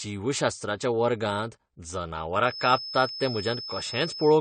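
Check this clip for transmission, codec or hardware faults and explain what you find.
Two faults are audible.

Throughout, the speech has nothing above 9 kHz and carries the artefacts of its first encoding. This is low-bitrate audio saved at a high bitrate. The file is likely a heavily compressed original, around 32 kbit/s, re-encoded as high-rate MP3. Re-encoding cannot restore the missing top end.

From 2.41 s to the end, a feedback whistle sits at 5.2 kHz, roughly 10 dB below the speech. It is thin and steady, swelling and fading slowly in level. The likely cause is a loudspeaker-to-microphone loop held just short of runaway feedback.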